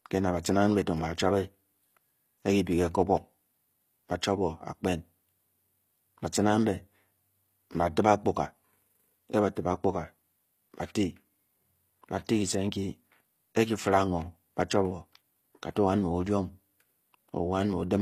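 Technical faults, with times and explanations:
Throughout, HE-AAC compression: the s sounds come across gritty and lispy, with a synthetic-sounding treble and nothing at all above about 14.9 kHz. The likely cause is HE-AAC coding at a low rate, which fits a bitrate around 24 kbps. It keeps only the lower spectrum and fills in the top by copying lower bands upward under a coarse envelope, so the rebuilt treble's harmonics no longer match the speech beneath it.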